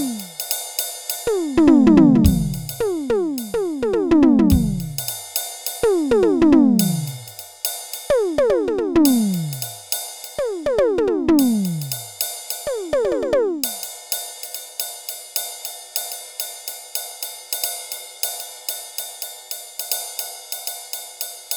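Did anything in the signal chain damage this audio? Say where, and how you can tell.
No, nothing in the chain has left an audible mark on this music at any stage from capture to playback.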